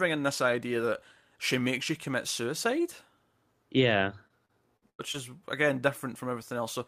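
From 3.85 to 5.16 s the speech breaks up with repeated packet loss, giving it a robotic sound. Five holes open in quick succession, the longest 91 ms, about 220 ms missing in all. Each is papered over by stretching the preceding sound, so roughly a sixth of the stretch is synthetic. Unlike a single dropout, which leaves one clean gap, this is a run of closely spaced patches that turns the voice choppy and mechanical.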